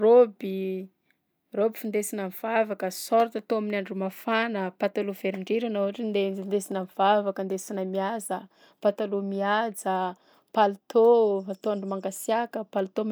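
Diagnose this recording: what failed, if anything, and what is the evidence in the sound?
A block of digital silence at 6.72 s points to the driver or buffer stage. The speech drops out for only about 0.67 ms, which fits a 32-sample block, and returns with no fade. Both hard edges fall so close together that they merge into a single sharp tick. The program likely did not fill the output buffer in time, so zeros were written in place of audio. Analogue crackle or a loose connection would leave irregular noise rather than a clean gap.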